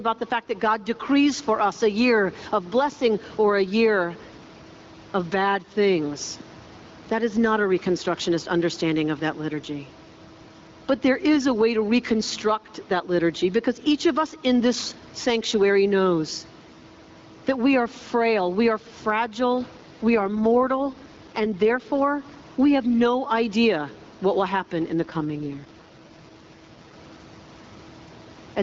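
A speech recording over an HD Voice call, with gain pumping running throughout: the level swings by around 10 dB, ducking whenever the talker gets loud, so quiet and loud passages sit unnaturally close in level and the whole thing sounds squashed. The likely cause is input gain set far too high, with a fast limiter or compressor pulling it back on each peak. Unlike steady noise or a fixed level problem, the level itself moves in time with the speech. Two AMR rate drops follow, from 19.77 to 21.90 s, just after "frail we are fragile", and from 24.98 to 26.94 s, just after "what will happen in". In each, the voice turns rough, raspy and more synthetic, consistent with the codec stepping down from 12.65 to 6.6 kbit/s on a weak radio link. A dropout or band-limiting fault would sound different: here the bandwidth stays the same, nothing goes silent, and the clearer sound returns once the rate recovers.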